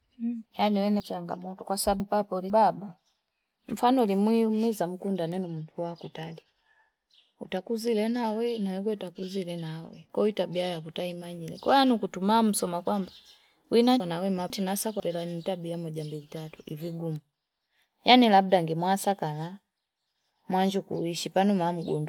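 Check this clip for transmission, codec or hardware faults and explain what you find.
There are two spots where chunks play out of order in this speech. From 1.0 to 2.5 s, a 500 ms chunk shows up two slots late. From 14.0 to 15.0 s, just before "nintabia moja mbili", one chunk lands a slot late. Nothing's missing, but each reshuffle leaves a jumbled moment with three hard joins.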